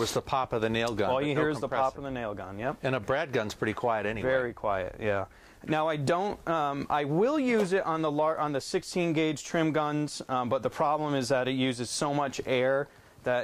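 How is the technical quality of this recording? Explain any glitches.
No glitches turn up anywhere in the recording, so there is nothing to explain.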